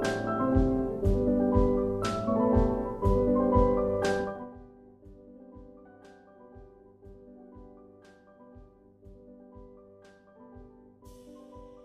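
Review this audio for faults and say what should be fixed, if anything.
Between 4.23 and 4.57 s a fast ticking zips across the sound as its level falls by around 25 dB. This is zipper noise: the gain drops in unsmoothed 1 dB steps, about a hundred per second, so each jump leaves a small click. Interpolate the gain per sample or ramp each step so the level glides instead of jumping.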